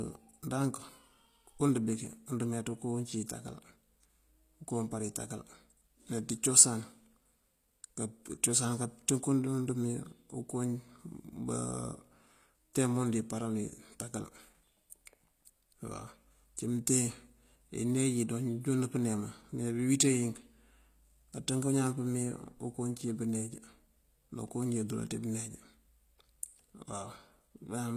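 From start to finish the speech has a gritty, metallic top end, with s sounds going lispy and nothing at all above 14.9 kHz. That's likely HE-AAC compression at a low rate, around 24 kbps, where the treble is patched together from copied lower bands and doesn't match the real harmonics.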